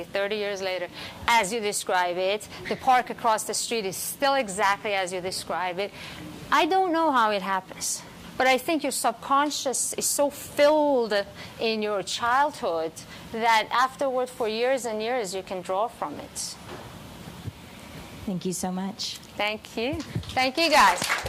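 No dropouts, clicks, distortion or other transport or processing faults turn up anywhere in the recording.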